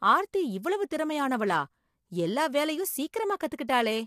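Throughout the speech, the audio has likely passed through low-delay AAC compression (AAC-ELD), at a rate that fits about 32 kbps. Its short frames resolve pitch harmonics poorly, so the voice sounds plainly rough and grainy, with noise filling the gaps between harmonics.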